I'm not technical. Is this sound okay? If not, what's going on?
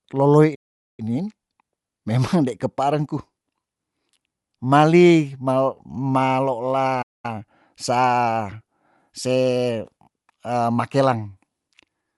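No, the speech has two kinds of problem.

The first runs through the whole clip: Bluetooth LC3 compression, likely from a wireless earbud or headset link. To fit the sound over the air, the codec throws detail away in small chunks of about 10 ms. Here nothing comes through above about 11.5 kHz, and the damage is plainly audible. Plain muffling would only dull the voice. Compression damage like this also leaves it sounding roughened and processed, across the full 12 seconds rather than in one spot.

The second is a playback stall, heard twice. The audio stops dead from 0.55 to 1.00 s, a gap of about 0.43 s, and again from 7.02 to 7.25 s, about 0.22 s. The player likely ran short of incoming sound or got held up, and fell silent until it caught up. A click or glitch would be over almost instantly. These are clear holes of silence long enough to notice as a pause.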